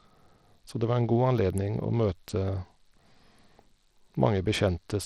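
Bluetooth SBC compression runs through the whole clip, from start to end. The speech carries a plainly audible gritty, grainy layer, with the highest treble thin and unsteady and nothing present above about 18.1 kHz. This is likely a low-rate SBC link, which fits a bitrate around 80 kbps. So few bits are shared across the encoder's sub-bands that the upper bands are starved and coarsely quantised, leaving that grit and flickering top end.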